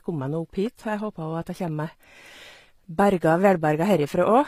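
A speech recording, likely passed through low-bitrate HE-AAC compression for its whole length. The damage is plainly audible: the treble has been regenerated by spectral band replication rather than carried through, which fits a rate around 24 kbps in the v2 profile. The synthesised upper bands don't line up harmonically with the coded lower spectrum, so s sounds come out gritty and metallic, and nothing reaches above about 15.4 kHz.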